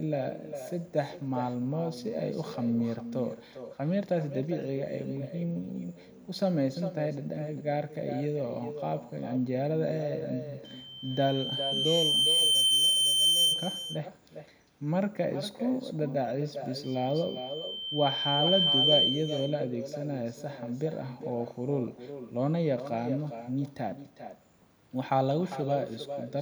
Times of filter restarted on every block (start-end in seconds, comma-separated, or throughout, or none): none